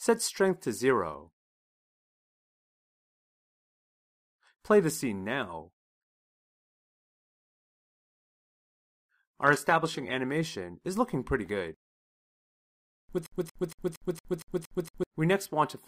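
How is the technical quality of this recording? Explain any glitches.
The recording has two glitches, one a drop in encoding quality and the other a repeating fragment near the end.

From 8.18 to 10.18 s the audio plays as an adaptive stream at a lower bitrate. When a connection slows, the player switches to a cheaper encoded version, and here the switch is sudden with no gap. Codec artefacts increase, and nothing is left above 14.9 kHz. The sound fits a step down from roughly 96 kbit/s AAC-LC to about 20 kbit/s HE-AAC. On a spectrogram this appears as a hard ceiling at 14.9 kHz between those two times, with smeared, blocky texture below it. The waveform stays continuous across both boundaries.

From 13.26 to 15.04 s there is a broken-record loop. A 0.23 s fragment repeats exactly, back to back, eight times, and whatever audio belonged in that span is lost. The likely cause is a stall in the player, encoder or stream, which kept outputting the last piece it held. 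A waveform shows one identical block tiled eight times. A spectrogram shows the same pattern stamped repeatedly at a steady rate of about four per second.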